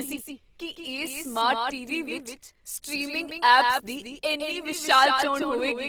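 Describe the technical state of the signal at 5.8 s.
At 5.8 s the signal still carries a doubled audio track, as it does throughout: a second copy of the speech, likely from a slower capture path, runs roughly 150 ms behind and about 5 dB quieter, giving a dry, full-band echo with no room decay.

Opus compression in its CELT music mode is also present at this point. The plainly audible damage fits a low bitrate around 16 kbps, likely the cause: the encoder keeps band energies but fills them with folded or noisy content, so the speech sounds grainy and rough despite bandwidth extending to about 20.3 kHz.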